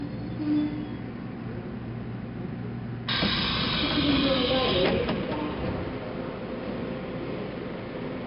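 Throughout, the audio has gone through 4-bit ADPCM compression. Each sample is coded as a coarse step from a prediction, and the damage is heavy. A gritty hiss tracks every loud sound, sharp attacks distort, and nothing remains above 5.3 kHz, consistent with roughly 44 kbps.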